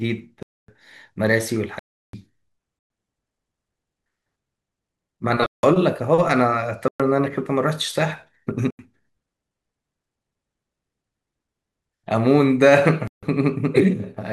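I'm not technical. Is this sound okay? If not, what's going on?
No. This speech has seven blocks of digital silence, at 0.43, 1.79, 2.79, 5.46, 6.88, 8.70 and 13.07 seconds, each lasting roughly a tenth to a third of a second. The sound drops abruptly to nothing and back.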